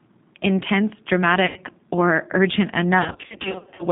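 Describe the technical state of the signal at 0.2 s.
At 0.2 s you're hearing G.729 codec damage, present through the whole clip. The speech is rebuilt from pulses and a vocal-tract filter in a 150 Hz to 3.7 kHz band, so it sounds rough and synthetic, which fits an 8 kbit/s VoIP link.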